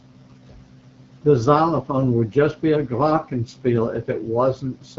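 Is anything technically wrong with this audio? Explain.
Yes. Throughout, the speech carries AMR wideband (HD Voice) codec damage, plainly audible, at a rate that sounds like about 8.85 kbit/s. The codec models the voice up to 6.4 kHz with pulse excitation and pads the top with shaped noise, so at this low rate the voice turns rough and raspy, with nothing above 7.6 kHz.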